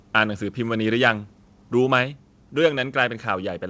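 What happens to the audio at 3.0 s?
From 3.01 to 3.03 s the peaks flatten with a harsh crackle, likely microphone overload, the input clipping about 2 dB past the converter's limit, unlike codec distortion. At 3.06 s the level drops by about 1 dB in one abrupt step, likely the microphone volume stepped down by the call software, a sudden step rather than a gradual fade.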